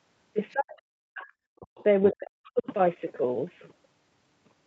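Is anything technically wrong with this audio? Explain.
Yes. The clip is speech with two kinds of call fault.

The first is the other side's voice leaking through. Second-voice fragments appear at 0.51 to 0.55 s, 1.59 to 1.83 s, 2.09 to 2.16 s and 2.46 to 2.50 s. They range from very quiet, around 40 dB under the talker, to fairly audible, around 15 dB under. The likely cause is residual echo. A loudspeaker fed the far end into the microphone, and the canceller left some behind.

The second is speech suppressed in double talk. From 0.53 to 1.28 s, and again from 2.12 to 2.67 s, the talker's level collapses. The deepest dips reach roughly 40 dB. About 0.7 s of the first stretch and half a second of the second are affected. Both fall where leaked far-end sound overlaps. The canceller likely mistook the talker for echo while both sides spoke, and turned everything down. The voice fades or drops out in pieces there. 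The call path's band limit, with nothing above 8 kHz, is heard throughout.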